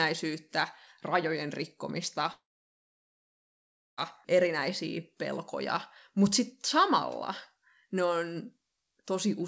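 At 2.32 s the speech cuts out until 3.99 s, likely a long network dropout. A short fading buzz or hiss stretches the last sound, then about 1.56 s of silence, and it resumes with that chunk simply gone. Across the clip nothing reaches above 8 kHz, which fits a G.722-style call codec.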